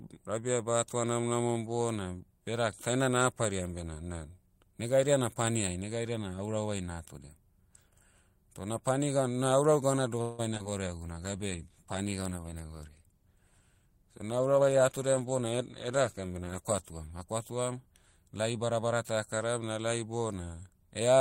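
At 10.21 s the speech breaks up for half a second, to 10.71 s: repeated packet loss (robotic sound). Four gaps land in quick succession, the longest 170 ms, and the receiver papers over them by stretching the last bit of audio, so nearly half that stretch is filler and comes out choppy.

Right after, at 11.03 s, there's a call bitrate drop from 32 to 16 kbps that holds at the bottom for about 6 s before lifting by 17.92 s. The encoder has half the bits to work with, so the speech gets coarser and duller, with a rough, watery edge through that whole section.

Inside that low-bitrate stretch, from 13.88 s to 15.35 s, you also get a jitter buffer speed-up. The buffer had built up extra delay and trimmed it by cutting out small pitch-period chunks, around 150 ms in all, so the speech runs at about 111% speed with the pitch unchanged and sounds a bit rushed.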